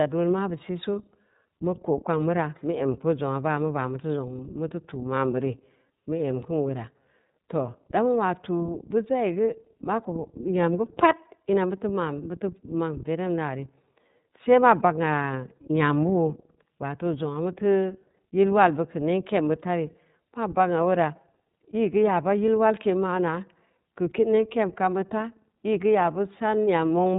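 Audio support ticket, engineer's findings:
iLBC codec artefacts across the whole speech clip. Band stops at 3.8 kHz, nothing above. Speech rough and synthetic, plainly audible. Each frame coded independently. Graininess fits 30 ms frames at 13.33 kbps.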